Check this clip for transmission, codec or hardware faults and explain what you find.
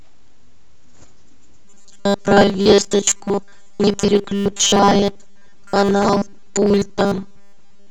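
One fault is present: robotic sound from repeated short buffers, running from 1.65 s to the end of the clip at about 7.91 s. The likely cause is audio arriving too seldom, so the playback side keeps replaying its last 5 ms buffer while fresh speech is skipped, for most of that stretch. Those repeats stamp a rigid 200 Hz pitch onto the speech, turning it into a metallic buzz that only loosely tracks the original syllables.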